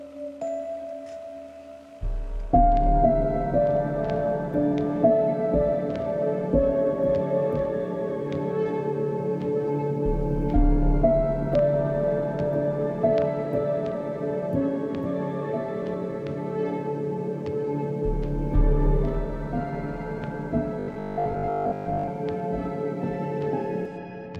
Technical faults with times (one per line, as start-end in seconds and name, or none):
20.79-22.11 robotic sound from repeated short buffers